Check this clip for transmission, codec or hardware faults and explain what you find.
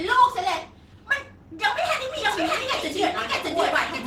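Two faults are present: low-rate Opus voice compression throughout, and a doubled audio track over the final stretch.

Opus voice compression runs the whole length. The encoder appears to work in hybrid mode, with a linear-prediction coder below 8 kHz and a transform layer above it, at a rate that points to about 16 kbps. That leaves so few bits for the excitation that the speech sounds plainly hoarse and slightly robotic, even though content still reaches high frequencies.

A doubled audio track starts at 2.17 s and lasts to the end. The second copy is most likely the same signal captured again through a slower path. It trails by roughly 0.7 s at about the same loudness, with no decay or room colour. It cuts in abruptly, so the speech is heard a second time over the live sound.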